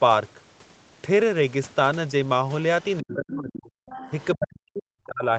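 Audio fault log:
2.82–3.16 s and 3.86–4.26 s, other side's voice leaking through: a faint second voice sits about 15 dB, then about 20 dB, below the talker, likely loudspeaker echo the canceller missed. On a spectrogram it shows as weak, separate harmonic traces under the main speech.
3.0–3.73 s and 4.35 s to the end, speech suppressed in double talk: the talker's level drops by roughly 35 dB, then roughly 40 dB, as both sides overlap, likely the canceller turning everything down. The waveform drops away, and the spectrogram shows gaps below the 8 kHz Opus ceiling.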